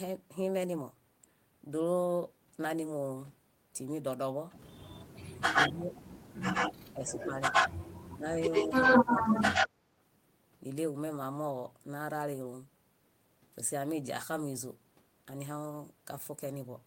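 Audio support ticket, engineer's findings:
Speech suppressed in double talk: likely the echo canceller mistaking near-end speech for echo while both sides talked and attenuating both. Dips at 5.52–5.94 s (up to roughly 15 dB), 6.93–7.46 s (roughly 10 dB) and 8.16–9.72 s (roughly 15 dB, about a second affected). The voice sinks, thins and cuts out in pieces.

Echo leak: likely incomplete echo cancellation on a loudspeaker endpoint, so residual mic pickup is sent back. A delayed copy of the voice, 107 ms behind, appears at 5.54–6.02, 6.53–6.74 and 7.06–7.94 s. At 8.51–9.68 s the delay is 84 ms. The echo sits near speech level or slightly above.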